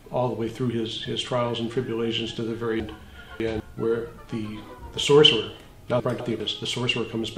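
Between 2.8 and 3.6 s, and again from 6.0 to 6.4 s, chunks out of order: a 200 ms block arrives late, three chunks late then one, and plays after what should follow it, so the sound jumbles. Waveform and spectrogram show hard vertical seams at each join.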